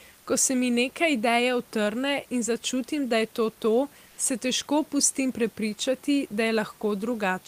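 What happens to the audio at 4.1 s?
The sender's voice detector treated the pause as silence and stopped transmitting, likely Opus discontinuous transmission, so the receiver substituted comfort noise in place of the background from 4.07 to 4.17 s. For about 100 ms after "da je to to" and before "se težko pustim prepričati", the real room noise, sitting about 32 dB below the loudest speech, becomes a smooth, featureless hiss at the same level, losing its natural texture until speech returns.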